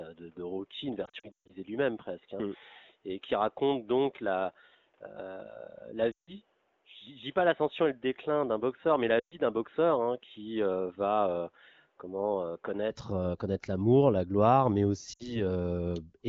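From the start until 12.91 s the speech sounds dull and boxy, with nothing above 3.8 kHz, a slightly lower level of about 5 dB, and a faint new background noise roughly 40 dB under the signal. At 12.91 s it opens up abruptly, with no gap. This is most likely an input switched to a poorer device, such as a headset call profile, whose narrow band, tone and noise floor differ from the main microphone's.

Within that dull stretch, lost AMR speech frames cause smeared, warbling dropouts. The first, from 1.05 to 1.54 s, is a scattered cluster with about 260 ms missing in all and a longest run of 140 ms, long enough for the sound to drop to near silence. Shorter stalls follow at 6.12 to 6.32 s and 9.19 to 9.38 s. After the switch, just after "l'amour la gloire mais", a brief 60 ms dip occurs between 15.13 and 15.42 s. In each case the decoder filled the gaps by repeating the last good frame with fading gain, and the speech returns briefly thin or rough. 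The AMR wideband (HD Voice) codec at 12.65 kbit/s gives a clear band up to about 7 kHz once the better input returns.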